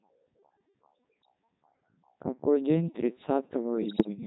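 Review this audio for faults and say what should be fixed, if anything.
The whole clip runs through the Codec 2 vocoder, and the heavy damage fits its 3.2 kbit/s mode. Only pitch, voicing, energy and a spectral envelope survive, and the speech is rebuilt from sine waves. That makes it steadily robotic and buzzy rather than smeared or watery like a waveform codec. To prevent this, send the speech through a waveform codec at a higher bitrate wherever the channel allows it.

Bit errors on digital voice radio strike from 1.23 to 1.29 s and again from 3.82 to 4.08 s. Each burst, at an error rate of a few percent, corrupts the frame parameters, so the synthetic voice jumps in pitch, level and tone into bleeps and warbles instead of dropping out or clicking as lost packets would. To prevent this, improve signal strength or add stronger forward error correction at the coverage edge.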